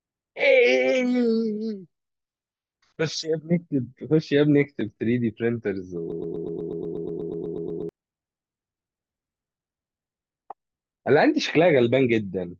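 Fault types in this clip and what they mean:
broken-record loop: From 6.12 to 7.89 s, one 122 ms fragment repeats 15 times back to back. Speech there is lost. A stalled stream is the likely cause.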